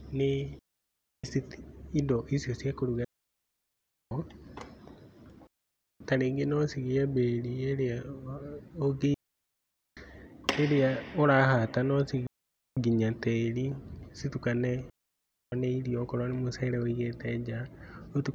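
Digital wireless dropout at 0.59–1.24 s, 3.04–4.11 s (after "indo icio cia kũruga"), 5.47–6.00 s, 9.14–9.97 s, 12.27–12.77 s (between "ĩrĩa ũrahata no" and "nginya tĩri citukane") and 14.90–15.52 s (before "nĩ irio okorwo nĩ"). The receiver lost too much data and muted, leaving clean silent holes of 0.5 to 1.07 s with no noise burst either side.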